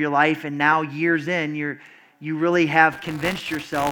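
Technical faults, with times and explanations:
2.91 to 3.91 s, buffer tearing: right after "in you're you really" the speech picks up a robotic buzz at 200 Hz that runs to the end of the clip. The writer and the hardware reader on the ring buffer have drifted into each other, so every period carries a small slice, roughly 7 percent, of audio from about 20 ms earlier, spliced in with hard edges on both sides. Those two clicks repeating once per buffer are what you hear as the rattle, and the 200 Hz rate fits a buffer period of about 5 ms.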